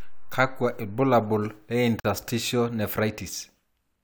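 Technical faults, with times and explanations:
2.00–2.05 s: gap at a join of encoded pieces. About 45 ms of silence opens in the middle of continuous speech, with its edges smeared by the codec, and the speech then resumes exactly where it left off. The speech was likely encoded as separate pieces and joined without trimming, so the encoder's start-up delay and last-frame padding stayed in. Unlike a dropout, nothing is missing; silence is inserted rather than replacing any sound.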